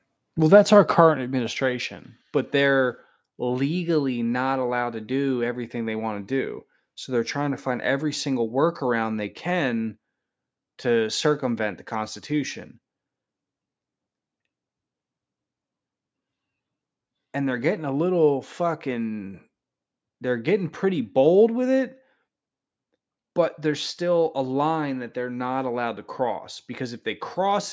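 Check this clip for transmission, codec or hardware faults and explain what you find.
No fault can be heard in the speech, which shows only the normal marks of call microphone processing: the lowest bass is trimmed by its high-pass filter and nothing sits above 8 kHz.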